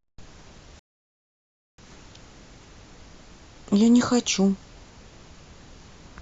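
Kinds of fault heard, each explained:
Rebuffering stall: playback starves for data, so the speech drops to silence from 0.79 to 1.78 s, adding nearly a second, then continues seamlessly; waveform and spectrogram show a blank gap.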